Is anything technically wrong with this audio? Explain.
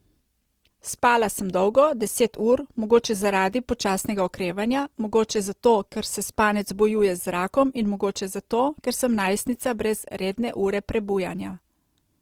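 Yes. Throughout, the speech sounds grainy and rough, with a noisy texture on voiced sounds. This is likely Opus compression filling bit-starved bands with noise, which fits a rate near 24 kbps.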